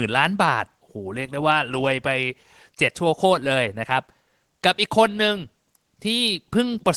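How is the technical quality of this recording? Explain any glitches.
No glitches can be heard in the recording. The speech has come through a call codec, so the top end rolls off at about 12 kHz, which fits a low-bitrate super-wideband call setting.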